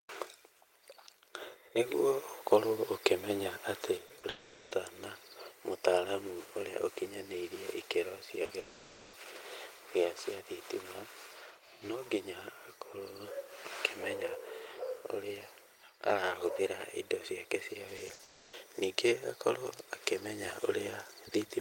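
At 3.97 s the level of this speech drops abruptly by about 6 dB and stays down to the end. That fits one channel dropping out, likely, before a mono sum: material shared by both sides halves, unlike a fade, which would slope rather than step.

Short concealed packet loss follows at 4.07–4.11 s, 4.19–4.25 s and 8.45–8.51 s, with 20 to 40 ms of audio missing each time. The decoder stretches the preceding sound across the hole, leaving a quick smear or wobble. The gaps are too brief to register as silence.

A long network dropout follows at 4.29–4.73 s, and again at 8.59–9.15 s. The last sound is carried on and fades for roughly 0.4 and 0.5 s respectively, likely because nothing arrived. The speech then resumes with that stretch gone.

Repeated packet loss (robotic sound) covers 17.97–18.21 s. Three gaps, the longest 60 ms, are patched in quick succession, so 42% of the span is synthetic. 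This produces a choppy texture with pieces missing rather than one smooth smear.

A further long network dropout runs straight on at 18.23–18.55 s, about 0.3 s of fading continuation with that audio lost.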